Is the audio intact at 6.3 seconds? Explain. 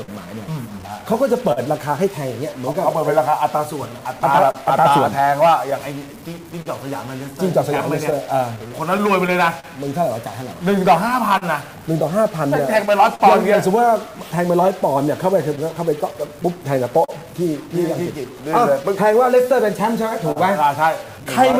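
No, 6.3 seconds falls inside three overlapping problems, all of which run across the whole clip.

The first is a stuck bit, likely from a broken data line or a faulty converter. One bit stays at a fixed value, so roughly half the samples come out wrong by that bit's weight, in a pattern that follows the waveform. You hear grainy noise or harsh, buzzy distortion, depending on how high the bit is, riding on everything, and quieter passages pick up a noisy fizz because the bit changes with the sign of small values.

Then there's clock drift between sender and receiver. The sender's clock runs about 3% slow compared with the receiver's, so the jitter buffer keeps draining. The receiver has to stretch things by repeating short pieces, and now and then the buffer runs empty for an instant. That gives small timing hiccups scattered at uneven intervals throughout the clip.

Finally, scattered short gaps are spread from about 0.03 to 21.56 s. 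Around forty lost or late packets were patched by carrying the last bit of sound forward, each gap at most about 50 ms and roughly 0.7 s of concealment in total, about 3% of the span. Each patch shows up as a brief tick, smear or stutter, so any given moment like 6.3 s could be sitting near one.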